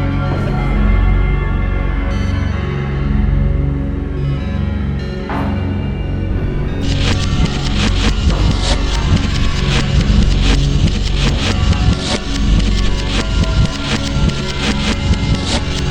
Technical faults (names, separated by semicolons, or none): corrupt frame decoded